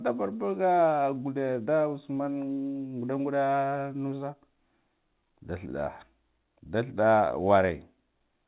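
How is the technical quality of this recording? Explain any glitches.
The recording has one audible glitch. It came through a call path with nothing above 4 kHz, which fits G.711 A-law at 64 kbps.

From 2.54 to 2.58 s there is short concealed packet loss. About 20 ms of speech never arrived at the decoder in time. The receiver covered the gap by extending the preceding sound for about 20 ms, then faded back into the real signal. It is heard as a brief smear or wobble, and any quick consonant in that spot can drop out.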